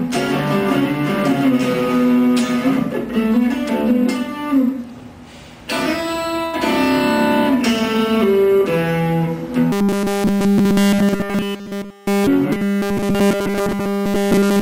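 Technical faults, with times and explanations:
6.45–6.55 s, burst of packet loss: about 80 ms of audio drops out. The last sound is stretched for roughly 76 ms and fades before playback jumps ahead. A spectrogram shows a smeared, decaying band, and the waveform shows a shrinking repeated shape with a discontinuity.
9.72–12.27 s and 12.52–14.61 s, robotic sound from repeated short buffers: the sound becomes a rigid metallic 200 Hz buzz, likely because nearly all of it is a 5 ms fragment repeated while new audio is skipped. A spectrogram shows evenly spaced harmonic lines, and the waveform shows a periodic pattern.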